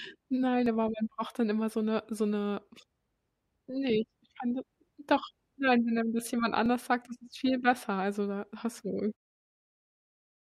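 At 0.66 s and again at 6.66 s the speech gives a tiny skip, the sign of an overlap between stream segments. Two consecutive segments claim the same moment, so the player trims the shared stretch, discarding audio that was never actually duplicated, and the waveform jumps. The exact 6-second spacing matches the segment length, which separates this from a random glitch. A dropout would insert silence, whereas here sound vanishes. The fade-out ending at 9.17 s is smooth, with no edge.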